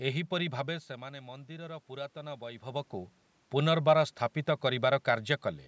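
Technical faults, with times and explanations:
0.66–2.92 s, automatic gain rising: just after the talker moves away from the microphone at around half a second, the input level drops by about 14 dB. The gain control then slowly raises its gain by about 4 dB over roughly two seconds, so voice and room noise swell together rather than the voice alone. On a waveform the envelope creeps upward across that span, and a spectrogram shows the noise floor brightening evenly below the 8 kHz ceiling.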